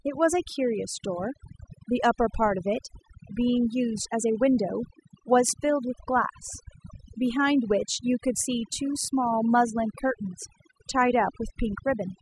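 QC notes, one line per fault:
Throughout: overdone noise removal. The denoiser's been pushed way too hard, so any band sitting near its noise estimate gets pulled right down, quieter bits of the speech included. That leaves a lowered background with twinkly specks between phrases.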